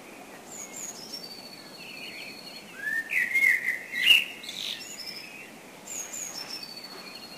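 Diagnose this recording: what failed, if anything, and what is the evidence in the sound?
The converter failed: sample clock jitter runs through the whole recording of sounds. The evidence is a hiss-like roughness that rides on the sound itself, growing with loud and high-frequency content and dropping away where the audio goes quiet. The sampling clock wanders by about 7 microseconds rms, so each sample lands early or late, and the resulting error, which scales with waveform slope, sits roughly 20 dB below the signal.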